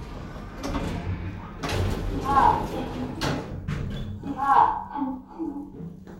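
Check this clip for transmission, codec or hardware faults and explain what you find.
Nothing turns up in the clip that I can find or need to explain.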